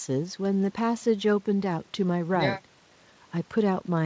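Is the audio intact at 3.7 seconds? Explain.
Yes, the audio is intact at 3.7 seconds, with no dropout, glitch or other fault at that moment.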